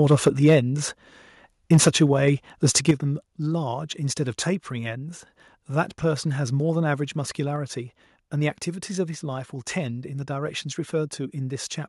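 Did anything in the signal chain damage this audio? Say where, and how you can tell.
Yes. At the converter, there's a hard, crackly edge on the loudest speech peaks at 0.10–0.54 s, 1.72–2.03 s and 2.89 s. That's microphone overload: peaks pushed about 2 to 5 dB past full scale, with their tops flattened. The likely cause is input gain set too high.

Further down, in call processing, the level drops abruptly at 0.28 s (about 4 dB), 2.91 s (about 6 dB) and 7.56 s (about 2 dB). That's the microphone volume stepped down, likely automatic gain control reacting to a microphone it found too loud or clipping, especially right after 2.89 s.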